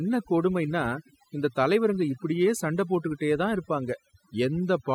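Speech processed with overdone noise removal throughout: a noise reducer set too aggressively switches individual frequency bands off whenever they sit near its noise estimate, taking quiet speech detail with them. The background drops and breaks up into twinkling specks. On a spectrogram, the gaps show as dark voids scattered with isolated bright dots, and speech harmonics look patchy and ragged at their edges.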